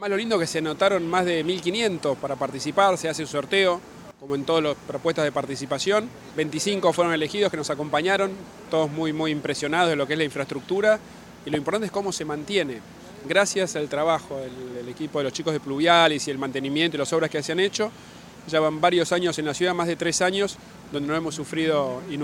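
A sudden gain jump runs from 4.11 to 4.3 s, where the audio and its background noise drop together by about 12 dB in a single step, with no fade. The likely cause is a digital gain change applied between consecutive samples without a ramp.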